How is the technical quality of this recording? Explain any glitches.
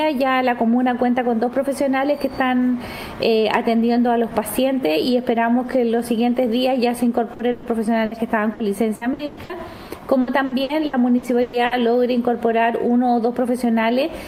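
The technical quality is impaired by packet loss in the second half. It appears as separate dropouts at first and then as sustained choppiness.

Bursts of packet loss occur at 7.33–7.42 s, 7.51–7.66 s and 8.05–8.14 s. Each time, the receiver extends the last sound and fades it, so a held buzz or dimming hiss covers 60 ms, 120 ms and 60 ms of lost audio, which is skipped when playback resumes. Each is a single isolated hole.

Repeated packet loss (robotic sound) follows at 8.53–9.52 s, with five gaps, and at 10.21–11.74 s, with seven gaps. The gaps are up to 120 ms long and cover about a third of each span. The patches come so close together that the audio turns choppy rather than breaking once.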